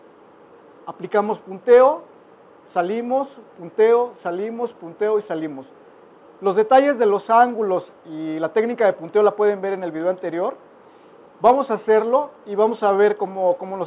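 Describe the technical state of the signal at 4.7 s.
At 4.7 s the signal is intact, with no dropout, distortion, glitch or other technical fault to be heard at that moment.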